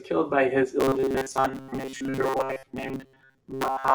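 Robotic sound from repeated short buffers begins at 0.8 s and continues to the end. The speech flattens into a rigid, metallic buzz pitched at 133 Hz. It still loosely tracks the words. The likely cause is audio arriving too slowly, so the playback side loops a fragment of roughly 7.5 ms over and over while fresh material is skipped. Most of the stretch is made of these repeats, and that fixed cycle is what imposes the buzz.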